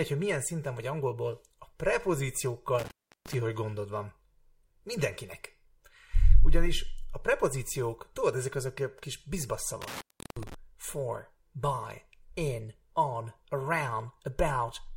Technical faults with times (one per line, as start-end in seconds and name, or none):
2.79-3.35 intermittent contact
9.82-10.54 intermittent contact